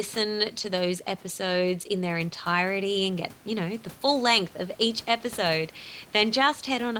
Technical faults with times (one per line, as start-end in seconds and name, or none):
0.55-0.69 lost packet rebuilt from error correction